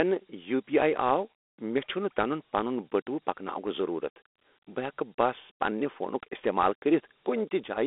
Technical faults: Dialogic VOX ADPCM

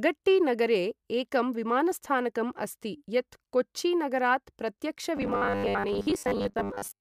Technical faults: robotic sound from repeated short buffers

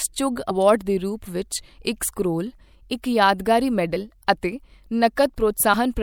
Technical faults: compressed frames skipped

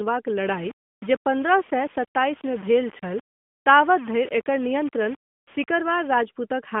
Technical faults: low bit depth without dither

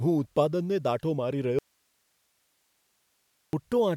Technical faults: audio dropout to a faint residue

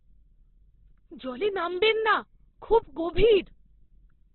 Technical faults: Opus compression

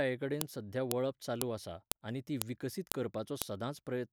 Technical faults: file header played as audio

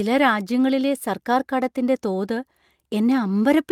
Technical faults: none

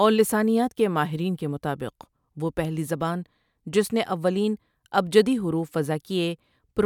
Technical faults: corrupt frame decoded

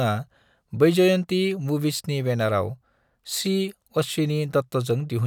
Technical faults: none

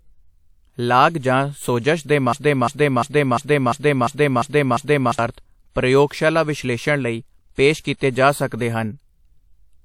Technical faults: broken-record loop

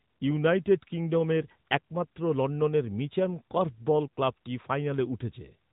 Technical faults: AMR narrowband mobile codec

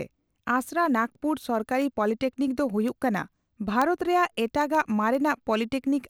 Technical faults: word clock ticks

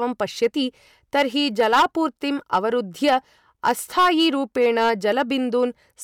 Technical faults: hard clipping

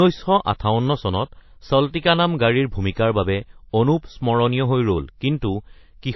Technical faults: transcoding between lossy codecs

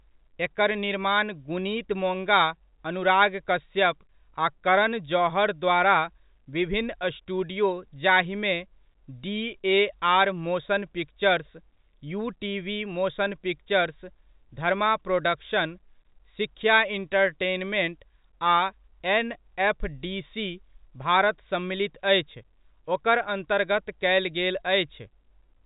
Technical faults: none

